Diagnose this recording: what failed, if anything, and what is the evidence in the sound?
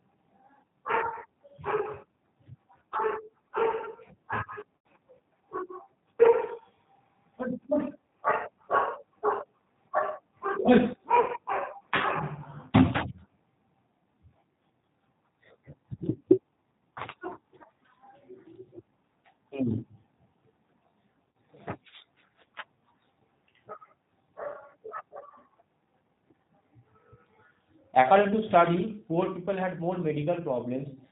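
Codec stage: the whole recording passes through G.729 (here the G.729A variant at 8 kbit/s), and the damage is plainly audible. The sound is intelligible but rough and slightly synthetic, because the decoder rebuilds each 10 ms frame from a vocal tract filter, a pitch predictor and a handful of pulses. On a spectrogram there is a hard ceiling at 4 kHz with nothing above it, and the harmonics below look grainy rather than smooth.

Network stage: VoIP packet loss concealed by the speech codec occurs at 4.77 to 4.86 s, 11.20 to 11.32 s and 21.29 to 21.33 s. The gaps are about 80, 80 and 60 ms, which fits runs of four, four and three 20 ms packets. The decoder repeats its last pitch and filter at falling gain, so each gap becomes a buzzy tone or coloured noise that fades. A spectrogram shows a frozen, smeared spectrum, and the waveform shows a decaying envelope that stays weak briefly after real audio resumes.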